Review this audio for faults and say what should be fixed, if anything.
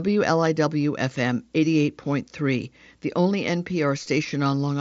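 Nothing stood out on listening to this speech, which comes over a Bluetooth mSBC headset link with nothing above about 7.7 kHz, so there is nothing here to fix.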